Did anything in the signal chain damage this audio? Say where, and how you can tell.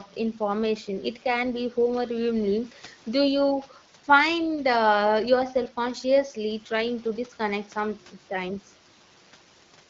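No, nothing in the signal chain has damaged this speech. A faint room noise sits about 29 dB below the speech, and the AMR wideband (HD Voice) coding at 12.65 kbit/s leaves only the light mark expected of that codec, which models the band up to 6.4 kHz and fills the top range to 7 kHz with shaped noise.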